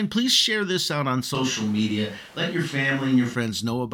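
Just after "share this out on", at 1.35 s, the speech turns suddenly roomy and hollow, with thinner bass, and stays that way until 3.35 s, when the close sound returns just as abruptly. This is a switch to a distant microphone, most likely because the close microphone's feed dropped out. Loudness holds steady, but room noise sits only about 25 dB below the speech. On a spectrogram the low end thins and a noise floor fills the gaps between syllables; the waveform shows smeared decays.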